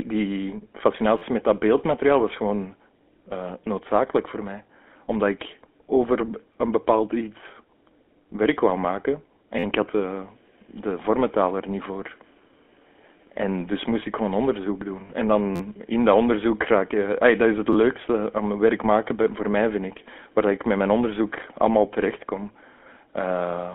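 Buzzy, gravelly speech runs throughout, with nothing above about 3.4 kHz: the GSM full-rate codec's pulse-driven vocal-tract model at 13 kbps. Brief stutters, heard as rapid clicks or buzzes, occur at 1.18–1.22 s, 6.54 s and 9.59–9.64 s. Each is a repeated buffer: an 11.6 ms slice replayed because fresh audio arrived late, which fits a 512-sample buffer. At 15.07–15.11 s a short metallic ring holds the sound: a lost GSM frame, about 20 ms, filled by repeating the previous frame's settings. Repeated-buffer stutters then return at 15.56–15.60 s and 17.73–17.75 s.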